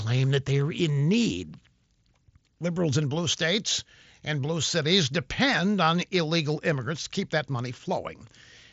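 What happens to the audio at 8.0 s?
Nothing goes wrong at 8.0 s: the speech carries on intact through the mSBC Bluetooth headset path, with no dropout, click or other fault at that moment.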